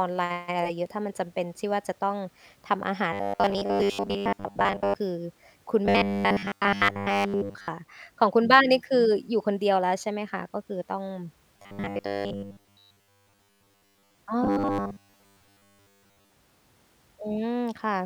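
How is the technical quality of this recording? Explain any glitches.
The speech has robotic sound from repeated short buffers in four stretches: 3.13–4.96 s, 5.86–7.68 s, 11.57–14.18 s and 14.44–16.34 s. A fixed 100 Hz metallic buzz is imposed on the voice. The likely cause is late audio, with 10 ms segments repeated to cover most of the missing sound.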